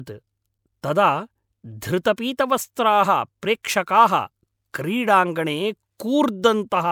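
No technical faults can be heard in this speech recording. There is nothing to point to at any moment in it.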